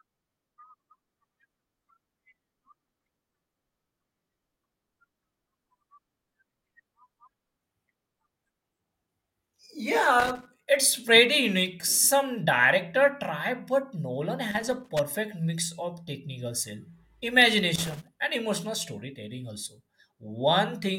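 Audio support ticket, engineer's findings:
Irregular crackle bursts in speech at 10.20–10.66 s, 14.51–14.99 s, 17.75–18.08 s. Loose connector crackle: worn or dirty contact intermittently breaking, chopping signal. Reseat or replace cable/jack.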